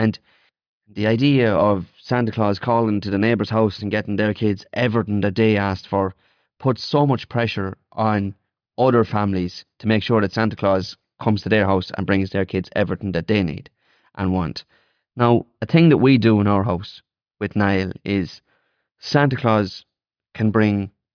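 Speech clip with no audible faults.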